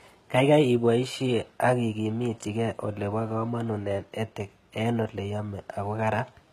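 From start to finish, the speech carries a plainly audible coarseness in the upper range: s sounds come out gritty and lispy, and the treble has a bright but metallic sheen that doesn't quite belong to the voice beneath it. This is likely HE-AAC compression at a low bitrate, around 20 kbps, where only the lower spectrum is truly coded and the highs are synthesised by copying lower bands upward, so their harmonics fail to line up.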